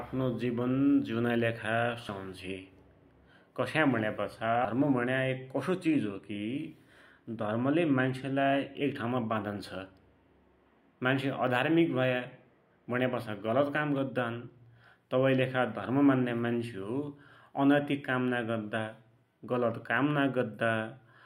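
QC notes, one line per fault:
2.09 s and 4.65 s: damaged data in a compressed stream. At each point a short chirp or blip cuts into the speech. Corrupted bytes made the decoder misread the frame there, lose sync and search for the next valid frame header.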